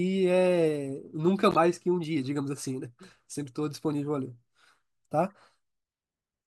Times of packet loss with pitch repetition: none

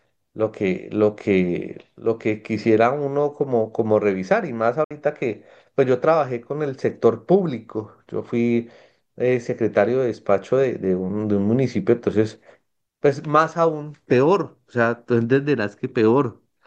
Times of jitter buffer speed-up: none

